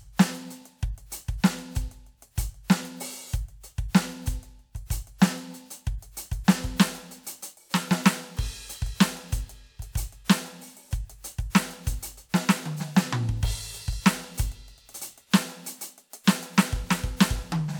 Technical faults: none

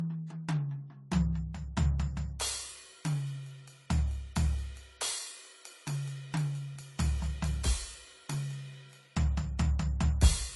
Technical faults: transcoding between lossy codecs

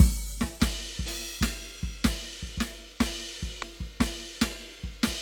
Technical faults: compressed frames skipped

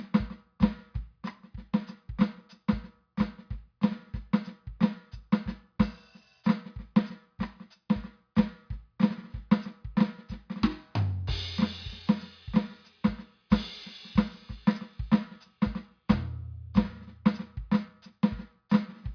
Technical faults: none

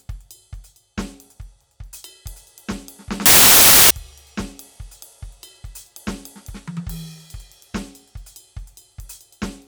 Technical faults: samples built from the wrong bytes

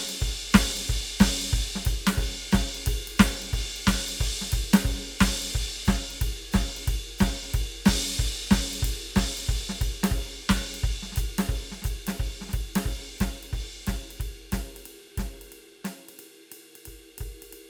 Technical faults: none

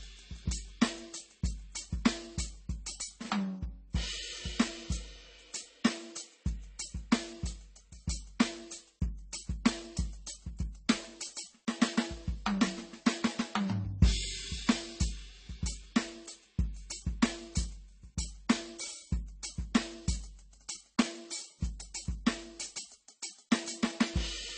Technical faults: transcoding between lossy codecs

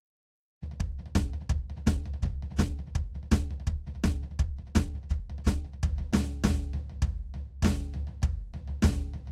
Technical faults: time-stretched section

